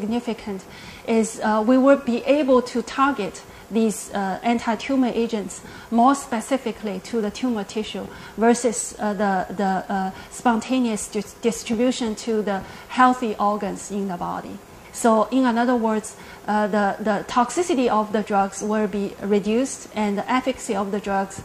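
No audible technical faults occur anywhere in this recording.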